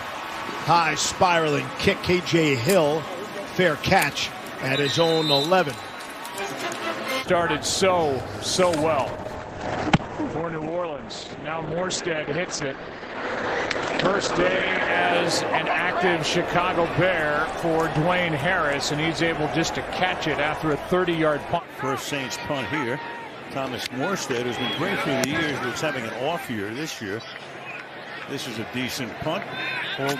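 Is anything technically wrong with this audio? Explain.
Yes, there's a call bitrate drop from 9.04 to 14.97 s. The bandwidth estimate collapsed, so the encoder coded far more coarsely. The sound goes rough and muffled, with top end cut from 20 kHz to 8 kHz, which fits a fall from about 96 to 10 kbps.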